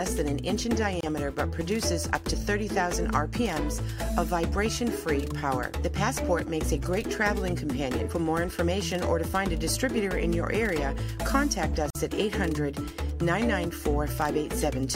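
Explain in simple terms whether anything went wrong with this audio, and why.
Brief silences cut in at 1.01 s (27 ms) and 11.90 s (49 ms). These are gaps at a join of encoded pieces, where separately encoded sections kept their padding.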